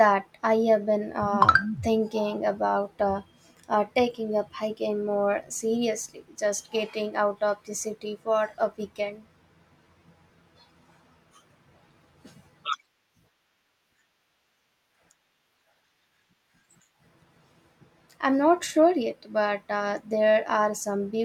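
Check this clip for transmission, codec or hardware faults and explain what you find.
Nothing wrong can be heard anywhere in the recording.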